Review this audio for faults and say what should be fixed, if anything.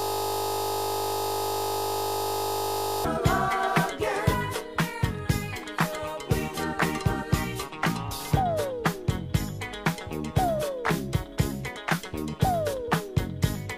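A system hang loop is already under way at 0.00 s and lasts until 3.05 s. One 20 ms piece of audio repeats about 150 times, producing a steady 50 Hz buzz. The hardware kept replaying its buffer while the system froze. Prevent it with a watchdog that mutes output when buffers stop refreshing.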